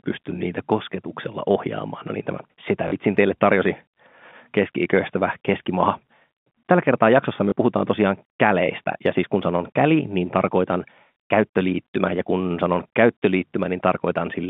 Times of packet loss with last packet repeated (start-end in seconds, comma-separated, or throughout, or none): 2.88-2.92, 7.50